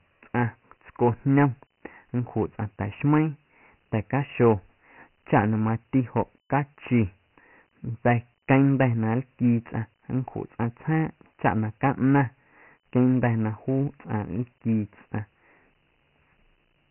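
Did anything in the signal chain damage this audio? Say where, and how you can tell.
Yes. The damage comes from the codec stage, a Dialogic VOX ADPCM encode that runs through the whole speech clip. Nothing is present above 3 kHz, and a gritty hiss rides on every stretch of speech. Together these point to 4-bit Dialogic (OKI) ADPCM at 6,000 samples a second, which fits a 24 kbps stream. With only four bits per sample, each step coarsely predicts the next, and the quantisation error becomes audible as heavy grit clinging to the signal.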